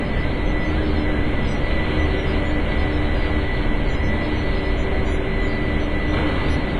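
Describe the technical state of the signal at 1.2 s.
At 1.2 s you're hearing the same heavy damage that runs through the whole clip, likely WMA compression at a low rate, around 24 kbps by the sound of it. Nothing survives above 10.5 kHz, weak detail has been zeroed out, and the long transform blocks smear noise into a ringing, washy haze that breathes with the sound.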